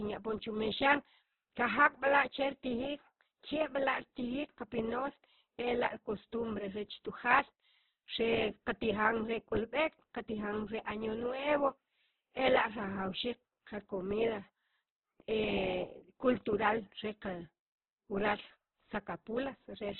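Throughout, the speech sounds rough, grainy and muffled, with nothing above 4.1 kHz: likely heavy Opus compression, which fits an 8 kbps rate.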